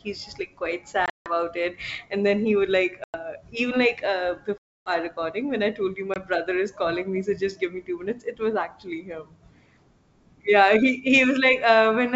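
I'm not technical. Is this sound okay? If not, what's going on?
No. The call has packet loss on an ADPCM call. Pieces of sound drop out as silent gaps at 1.06–1.32 s, 3.04–3.16 s, 4.58–4.91 s and 6.14–6.17 s. After each gap the sound returns briefly slightly distorted, then settles.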